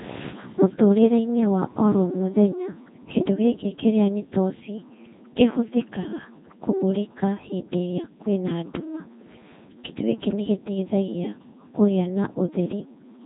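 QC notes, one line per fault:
Throughout: mains hum. A steady low tone sits at 60 Hz beneath the speech, well below it at around 25 dB down, with some low harmonics above. Power-line current leaking into the signal path, through a ground loop or a nearby transformer, puts it there. On a spectrogram it is a thin, unbroken horizontal line at 60 Hz, with weaker lines at its multiples. On the waveform it is a slow, regular ripple that stays visible in the pauses.
Throughout: Codec 2 vocoder, heavily damaged. The speech sounds robotic and buzzy, and nothing comes through above 3.8 kHz. The coarseness fits the 2.4 kbit/s mode. The decoder does not keep the original waveform. It rebuilds each frame from pitch, voicing, energy and a rough spectral envelope using summed sine waves, so natural texture is lost. A spectrogram shows smeared, blocky harmonics and a hard ceiling at 3.8 kHz. The waveform looks regular and synthetic.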